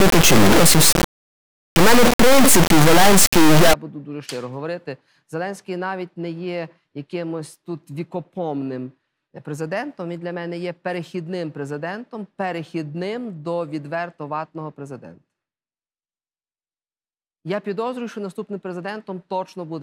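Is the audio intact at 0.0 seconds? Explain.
No. From the very start to 3.73 s the sound is an extremely loud, harsh buzzing square wave that drops to silence where the material is very quiet. This is an integer read as float fault: 32-bit integer samples are being interpreted as 32-bit floating-point values. The bit patterns decode to numbers that are either near zero or far beyond full scale, so the output slams between silence and the clipping limit.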